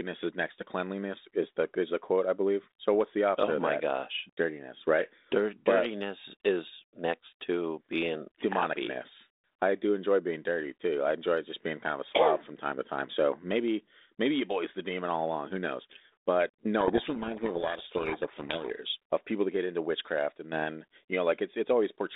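A codec payload misread hits this speech clip from 16.8 to 18.76 s, ending just before "of people that get". The two ends disagree on the bit order of the G.726 code words, so the decoder rebuilds each sample from scrambled difference values. For those two seconds the speech is buried in harsh, rasping distortion. The surrounding telephone-band G.726 ADPCM audio, limited to 250 Hz to 3.7 kHz, carries only light coding grain, which fits 32 kbit/s.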